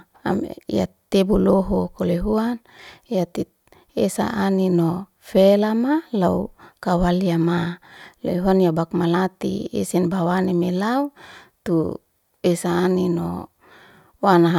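Nothing technical gets in the way here; it's a speech recording with no faults to point to anywhere along its run.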